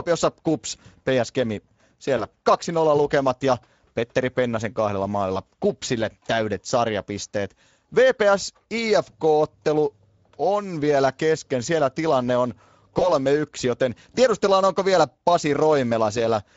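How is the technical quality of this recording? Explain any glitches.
The recording has plainly audible codec damage throughout and two short dropouts.

The whole clip carries Speex codec coding. Speex is a CELP speech codec that models the voice as a filter driven by an excitation signal. At this setting the excitation gets too few bits. The speech turns noisy and hoarse. The damage fits a middle-rate mode of roughly 17 kbps.

At 2.17 to 2.26 s and again at 12.99 to 13.13 s, there is VoIP packet loss concealed by the speech codec. Each gap fits one lost 20 ms frame. The decoder filled the hole by repeating its last pitch and filter at falling gain. The sound smears into a brief buzzy tone or coloured noise that fades. Because each frame builds on the previous one, the distortion lingers past the lost frame, to about 90 ms and 140 ms.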